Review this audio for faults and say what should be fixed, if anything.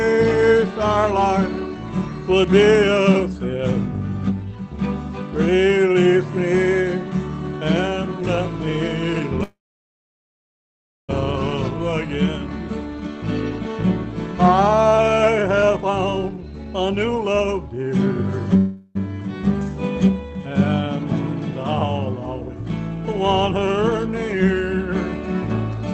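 Call audio freezes occur at 9.43 to 11.11 s and at 18.57 to 18.97 s, likely from delayed packets draining the jitter buffer. The first stretches the last sound for 1.65 s and falls silent after a brief tail. The second holds the last sound for 0.39 s. Playback resumes where it stopped, adding delay without losing content. Better network stability or a deeper jitter buffer would prevent these freezes.

Jitter buffer speed-up runs from 15.63 to 18.06 s. The receiver trimmed short pitch-period slices to shed about 0.3 s of built-up delay, so the audio plays at 111% speed with unchanged pitch and sounds hurried. Smoother packet delivery, or a gentler catch-up rate, would prevent this.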